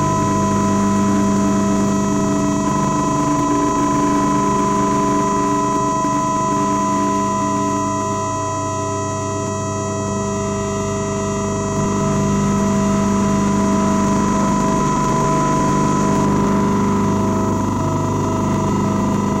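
From start to finish the everyday sound carries hard clipping: the signal runs about 8 dB hotter than the stage can pass, so roughly one sample in fourteen hits the ceiling and is sliced flat. Those squared-off tops throw harmonics high up the spectrum, giving a harsh fuzz on every loud moment. The abrupt edge sets it apart from soft saturation, whose rounded peaks would sound warm rather than brittle and crackly.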